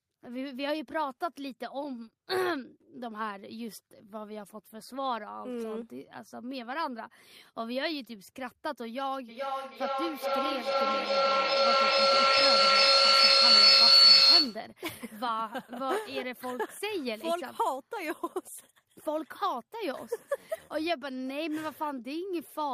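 A feedback loop forms in this speech clip when a second device in the same room picks up the loudspeaker output and sends it back into the call, gaining level on each pass. From 9.28 s to 14.8 s this builds into a feedback howl near 4 kHz, with a loop delay of roughly 0.4 s, peaking about 14 dB above the speech before the loop breaks.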